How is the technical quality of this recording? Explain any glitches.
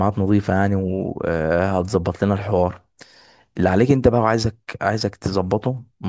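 No glitches turn up anywhere in this speech recording, so there is nothing to explain.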